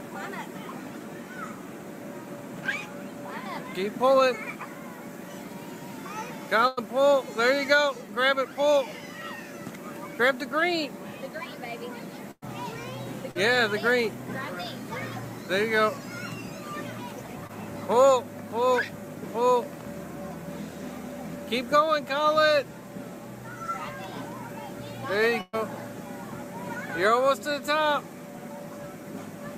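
The audio has two kinds of network damage. A burst of packet loss occurs three times, at 6.67 to 6.79 s, 12.31 to 12.44 s and 25.41 to 25.55 s, removing about 100, 100 and 120 ms of the signal. In each case the receiver carries the last sound forward and fades it, giving a held buzz or decaying hiss before the audio resumes further on. The second and third bursts also drop into about 30 and 20 ms of outright silence before the signal returns. Short concealed packet loss appears at 13.31 to 13.37 s and 17.47 to 17.51 s, with about 40 and 20 ms lost. There the decoder bridges the hole by extending the preceding sound and cross-fading back. The result is only a brief smear or wobble, and a short transient can disappear.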